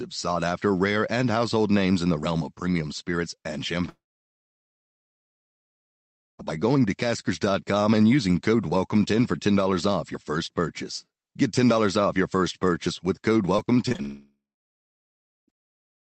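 From 3.89 to 6.41 s, right after "of premium spirits and", a long network dropout, likely from a stall in packet delivery, removes about 2.5 s of speech. A brief fading buzz gives way to roughly 2.4 s of near-silence before "by going to" resumes. On a waveform this is a flat gap; on a spectrogram, a blank band.

Between 13.57 and 14.00 s, after "first purchase with code", repeated packet loss gives a choppy, robotic texture. Six short holes, the longest 23 ms, are patched over, and about a fifth of the span is concealed. A spectrogram shows smeared, stuttering vertical breaks.

At 14.02 s a second long network dropout, likely another delivery stall, begins and lasts to 15.50 s. After a brief concealed tail, about 1.1 s is silent, again a flat stretch on the waveform.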